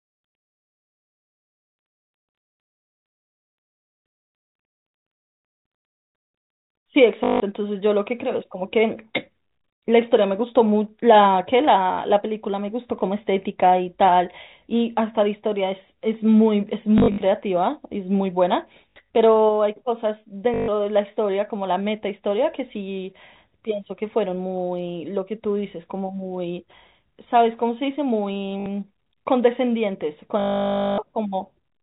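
Short robotic stutters, buzzing at about 50 Hz, occur at 7.24, 16.98, 18.91, 20.54 and 28.6 s, with a longer 0.58 s stutter at 30.4 s. This is packet loss with last packet repeated: the receiver replays the last packet it got until new ones arrive, and the buzz rate fits 20 ms packets.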